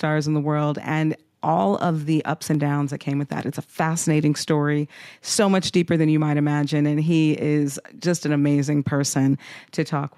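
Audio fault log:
2.54 s and 3.41 s, dropped samples: two sharp single clicks, the first between "all of the ups" and "downs that came with", the second just after "downs that came with". Each is likely a fraction of a millisecond of missing samples, making the waveform jump abruptly.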